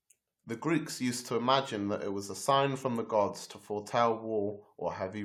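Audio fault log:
No technical faults can be heard anywhere in the speech signal, which plays continuously throughout.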